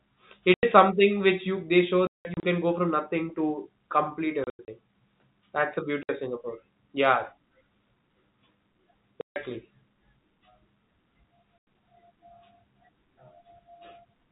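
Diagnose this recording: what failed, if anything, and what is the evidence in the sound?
Packet loss filled with silence, a network fault, cuts holes at 0.54, 2.07 to 2.43, 4.44 to 4.68, 6.03, 9.21 to 9.36 and 11.6 s. Gaps run 60 to 180 ms in 30 ms steps, which fits 30 ms packets, and the receiver inserts hard-edged silence.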